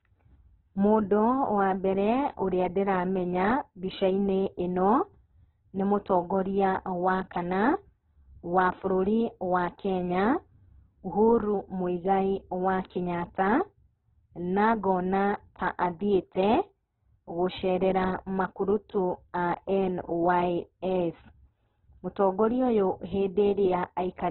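Throughout the speech, the audio has likely passed through heavy Opus compression at a very low bitrate, something near 8 kbps. With so few bits, the encoder keeps each band's overall energy but fills in the detail with folded or noise-like content, and it narrows the bandwidth so that nothing remains above 4.2 kHz. The result is a dull, band-limited sound whose tones come out rough, grainy and noisy.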